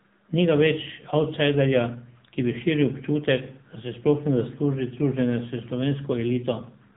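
From start to finish the speech carries AMR narrowband mobile codec damage. Nothing survives above about 3.8 kHz, and the heavy buzzy, synthetic edge fits a low mode near 6.7 kbps. That pulse-driven vocal-tract resynthesis is what separates it from a simple low-pass filter.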